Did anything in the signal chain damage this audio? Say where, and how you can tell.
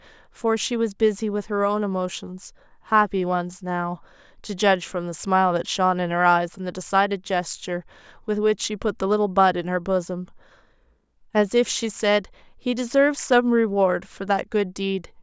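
No, nothing in the chain damaged this speech.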